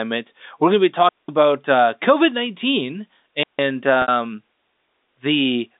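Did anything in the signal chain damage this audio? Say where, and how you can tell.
Yes. The damage sits in the radio link. There are two digital wireless dropouts. The first runs from 1.09 to 1.29 s and lasts about 197 ms. The second runs from 3.43 to 3.59 s and lasts about 157 ms. Each is a clean hole of near silence. There is no burst of noise on either side. That points to a receiver muting itself after losing too much data, using a very short fade rather than passing corrupted audio.

The second fault is on the network side: packet loss with pitch repetition. At 4.02 to 4.08 s, 60 ms of audio is missing. That fits three lost 20 ms packets. The receiver concealed the gap by repeating the last pitch period and fading it out. The repeated pitch fades toward silence, and the speech returns with a short cross-fade. The concealment, not the loss itself, is what you hear. The telephone band of roughly 250 Hz to 3.7 kHz is simply the G.711 line limit.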